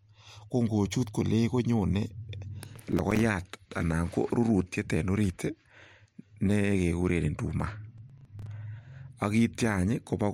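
Speech with two bursts of processor overload crackle, 2.59 to 3.21 s and 7.98 to 8.47 s, where a string of roughly 5 ms buffers drop out to silence, leaving gritty tearing.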